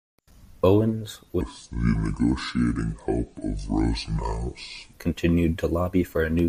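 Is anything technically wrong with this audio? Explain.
Yes, two faults affect this speech clip.

A section at the wrong speed runs from 1.41 to 4.93 s, playing at 0.642 times normal speed, likely because that stretch was fitted to the wrong clock. Speed and pitch fall together, so the speech drags and drops roughly seven semitones, sounding deep and slow.

A train of clicks appears from 6.39 to 6.48 s, with pulses arriving at about 10.6 per second at an irregular pace. The likely cause is interference or a faulty connection. Similar-shaped pops tick over the audio, peaking a few decibels above the speech.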